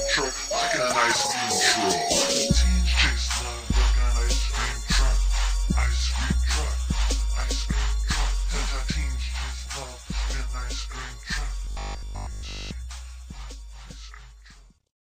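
Robotic sound from repeated short buffers at 11.65–12.73 s turns the audio into a rigid 50 Hz buzz, likely a 20 ms buffer looping in place of most of the real audio.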